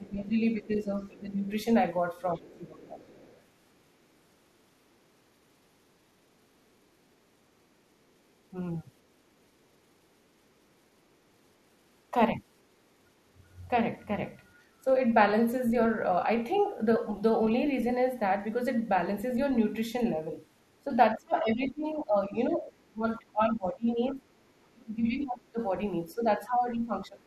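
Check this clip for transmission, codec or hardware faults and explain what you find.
Two echo-canceller faults recur through the clip.

Speech suppressed in double talk occurs at 0.0 to 1.47 s, 2.36 to 2.99 s, 20.87 to 25.6 s and 26.15 s to the end. The likely cause is an echo canceller that could not separate the near-end talker from loudspeaker echo and pulled everything down together. The speech dips by roughly 15 dB, reaching about 20 dB in the long stretch after 20.87 s.

The other side's voice leaking through is audible at 0.76 to 1.2 s, 2.2 to 3.43 s, 16.56 to 16.62 s and 24.08 to 24.16 s. It is faint, some 20 to 30 dB below the talker. This is likely loudspeaker playback that the canceller left partly unremoved from the microphone, so the far voice slips in as scraps or longer stretches, sometimes overlapping the suppressed stretches.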